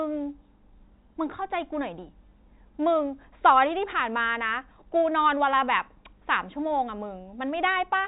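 No technical faults can be heard in the speech, which carries the narrow band below 4 kHz of G.711 telephone coding working as it should.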